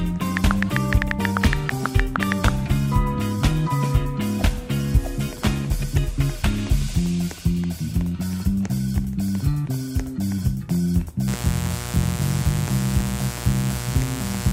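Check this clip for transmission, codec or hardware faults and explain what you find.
One hardware fault is present: mains buzz from 11.27 s through to the end of the clip at 14.53 s. The buzz is tied to a 60 Hz supply. Sharp switching spikes, produced twice per mains cycle by something like a dimmer, a rectifier or an unshielded lead, are coupling into the signal path. That spike train carries harmonics of 60 Hz well up into the kilohertz range. It is heard as a steady, raspy buzz sitting roughly 10 dB below the wanted sound throughout the final three seconds.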